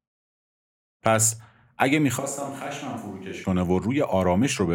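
Speech that, from 2.20 s to 3.43 s, changes abruptly to a hollow, roomy sound with thinner bass, about 10 dB quieter, and with room noise sitting faintly behind it, roughly 35 dB below the speech. It returns just as suddenly. The likely cause is a switch to a distant microphone. A simple gain drop would only lower the level, but here the room reflections and background noise rise relative to the voice.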